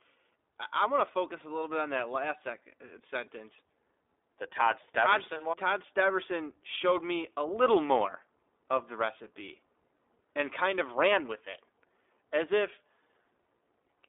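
From start to finish the speech carries iLBC codec damage. Nothing reaches above 3.8 kHz and the low end thins below about 300 Hz, a telephone-style 300 to 3600 Hz band. Within it, the speech stays intelligible but has a plainly audible rough, slightly synthetic grain, consistent with the 15.2 kbps mode coding 20 ms frames independently. That grain is what separates it from a clean band-limit filter, which would sound muffled but smooth rather than rough.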